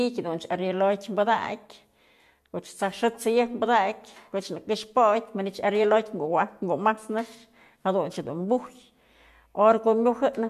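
Speech, with no audible faults.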